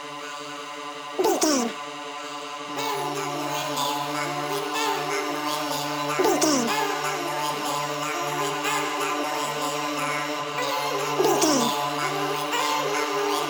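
From start to finish the sound runs twice as fast and a full octave high, 12 semitones up. This is audio read two samples at a time: each pair of samples was taken as one frame, doubling the speed.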